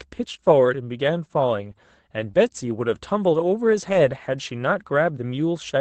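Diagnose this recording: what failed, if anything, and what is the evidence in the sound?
Network stage, short concealed packet loss between 2.31 and 2.35 s: about 20 ms of audio failed to reach the decoder in time. The receiver covered roughly 19 ms of it by extending the preceding sound, then blended back into real audio, leaving a brief smear in the speech.

Network stage again, a lost packet rebuilt from error correction at 3.89 to 3.95 s: 40 ms was reconstructed, which points to two lost packets. Opus played the low-bitrate copies carried in the following packets, so there is no gap, but that stretch sounds rougher and noisier than the surrounding 8 kHz-bandwidth audio.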